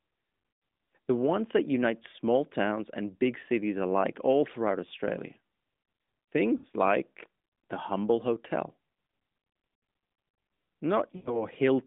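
At 0.54 s, 6.58 s and 11.16 s there are lost AMR speech frames. The first two gaps last about 60 ms, which fits three 20 ms frames. The third runs to 11.45 s. Each time, corrupted frames were dropped and the decoder extended the last good pitch and vocal tract shape at falling gain. The sound smears into a short, fading warble. The 11.16 s gap sags furthest before the speech returns briefly rough, through the narrowband phone band.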